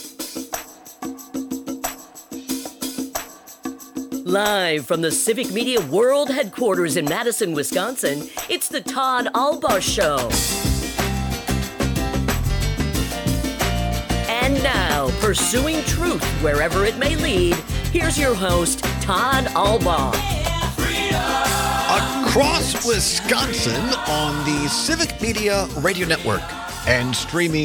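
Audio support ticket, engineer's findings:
Engineer's findings: no audio fault found in this clip.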